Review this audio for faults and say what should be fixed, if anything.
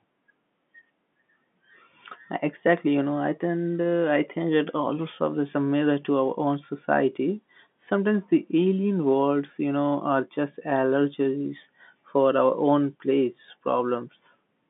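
Nothing here needs fixing: the speech sits within the normal G.711 telephone band of about 150 Hz to 3.5 kHz, as expected for a 64 kbps mu-law line.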